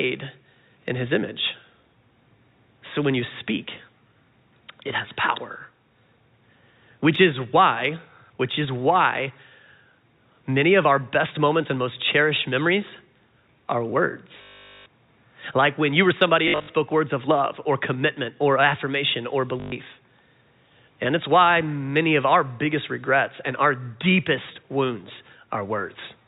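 Packet loss with last packet repeated hits this speech clip at 14.42–14.86 s, briefly across 16.48–16.68 s after "when you or somebody", and at 19.6–19.72 s after "commitment or affirmation or". Missing audio is filled by looping the previous fragment, giving robotic stutters and a buzz that fits 20 ms packets. The G.711 telephone coding keeps everything below 4 kHz.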